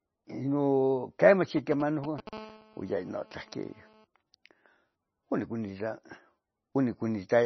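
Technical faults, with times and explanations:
Throughout, MP3 compression. The speech has nothing above about 5.9 kHz, so s sounds are dull and clipped. Heavy damage gives a watery, swirly texture as weak frequency lines drop in and out between frames. Consonant attacks smear. The encoder was likely working at a low bitrate, around 23 kbps. With so few bits, it cut the treble and discarded detail it judged less audible.
1.57 to 2.29 s, GSM signalling bursts. A galloping dit-dit-dit pattern of short buzzes cuts across the speech. It is loud, roughly 10 dB below the speech. A nearby 2G phone was sending brief groups of radio bursts while signalling to the network. The audio circuit rectified those pulses into sound. Each burst group carries the 217 Hz pulse rate, which gives the short buzzes their pitch.
2.33 to 4.05 s, GSM phone buzz. A hard, raspy buzz at 217 Hz runs steadily for about 1.7 seconds. 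It sits about 23 dB below the speech and has no relation to it. The same phone is now transmitting continuously, as in a call, pulsing 217 times a second. The circuitry demodulates these sharp on-off pulses. Their abrupt edges create many harmonics above 217 Hz, hence the rasp.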